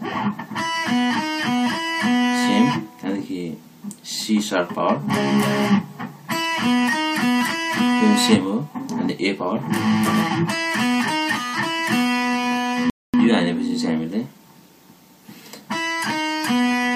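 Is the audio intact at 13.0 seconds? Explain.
No. From 12.90 to 13.14 s a rebuffering stall drops the sound to silence for about 0.24 s: playback ran out of downloaded audio and paused until more arrived. It then resumes exactly where it stopped, so no audio is lost, but the gap adds time.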